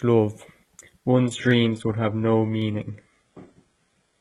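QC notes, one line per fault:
0.62 s, 1.51 s, 2.62 s: dropped samples. Each is a single sharp click where the waveform jumps abruptly to a later value, likely from a tiny fraction of a millisecond of missing audio. On a spectrogram each appears as a thin vertical line spanning all frequencies.
1.15 s to end: adaptive stream at a lower bitrate. The sound suddenly gains codec artefacts, smeared and watery, which fits a switch from roughly 96 kbit/s AAC to a 12 kbit/s HE-AAC version. The spectrogram shows the upper band abruptly cut or replaced by patchy texture, with no gap.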